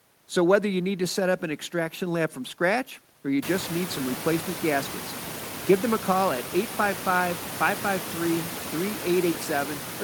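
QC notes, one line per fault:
No faults are heard in this speech clip. The room noise rises by about 24 dB at around 3.5 s and then sits about 12 dB below the speech.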